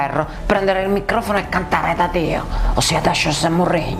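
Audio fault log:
0.17–3.78 s, clock drift buffer slips: Short clicks recur about every 0.60 s across this span. Each one is a tiny jump where a few samples go missing or repeat. The steady spacing likely comes from two clocks disagreeing by roughly 300 ppm.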